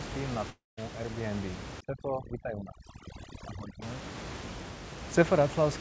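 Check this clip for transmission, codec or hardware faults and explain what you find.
Two faults are audible in the speech, over the low room noise about 10 dB below it.

From 0.50 to 0.79 s there is a long network dropout, likely from lost packets. The concealment buzz fades, the waveform flattens to silence, and about 280 ms never returns.

From 1.81 to 3.82 s there is overdone noise removal. Bands near the noise estimate are gated off, leaving twinkling speckles scattered across an otherwise black spectrogram background.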